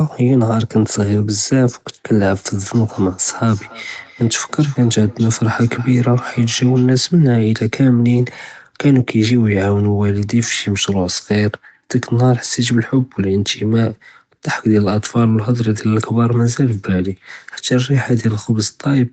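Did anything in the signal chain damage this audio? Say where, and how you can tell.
Yes. A feedback echo between two devices entered at the call stage, from 2.62 to 6.92 s. A second device in the same room played this speech back, and this microphone picked it up again. The local echo canceller removes only its own device's playback, so it let these repeats through. Each one returns about 300 ms later, roughly 23 dB below the speech, thinner and more ringing each time. Above 8 kHz the audio is empty, which fits a wideband Opus call path.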